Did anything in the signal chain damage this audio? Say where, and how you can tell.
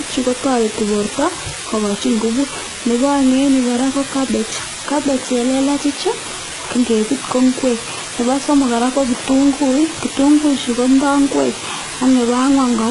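Yes. From start to finish a constant, even hiss sits over the speech, only about 10 dB below it, with no distortion in it. That points to sample-format conversion: the audio was reduced to 4 bits with dither, so the rounding error became steady white noise instead of distortion.

The codec stage also left heavy damage throughout: the treble sounds rebuilt rather than natural, s sounds come out gritty, metallic or lispy, and nothing remains above 11 kHz. This is likely HE-AAC v2 compression at a very low bitrate, around 12 kbps, with the treble copied up from lower bands.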